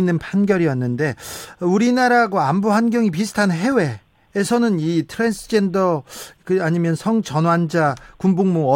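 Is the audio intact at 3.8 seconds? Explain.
Yes, at 3.8 seconds the speech plays through intact, with no audible fault at that moment.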